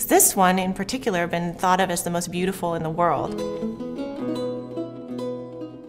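Nothing stood out as a technical fault on listening to the clip.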